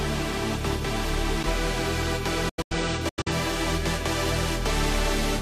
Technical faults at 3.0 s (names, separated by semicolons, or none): digital broadcast dropout